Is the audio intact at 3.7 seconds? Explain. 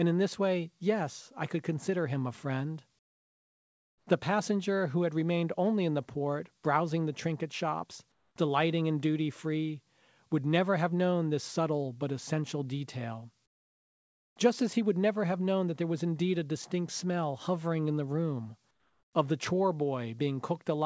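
No. From 2.99 to 4.07 s, just after "consider him a friend", the real background is replaced by comfort noise: about 1.08 s of steady, featureless hiss about 16 dB quieter than the room sound it stands in for. The likely cause is discontinuous transmission. The sender's voice detector judged the pause silent and stopped sending audio, so the receiver filled the gap with synthetic noise roughly matched to the background, consistent with RFC 3389 comfort noise.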